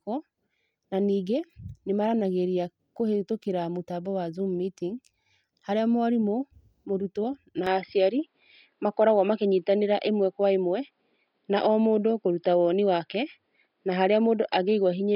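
At 7.67 s the speech abruptly turns duller and narrower, and stays that way to the end. The likely cause is an input switched to a poorer device mid-recording. From that point nothing is present above 5.1 kHz, so the top end and sibilant detail drop out. The switch is seamless, with no gap. It brings a level shift of around 5 dB and a faint new background noise floor roughly 55 dB below the speech.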